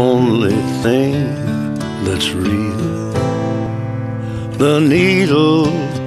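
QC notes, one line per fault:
0.81–0.84 s, damaged data in a compressed stream: a short glitch of about 30 ms where corrupted bytes in the encoded stream make the decoder misread frames, lose sync and hunt for the next valid frame header before clean sound resumes.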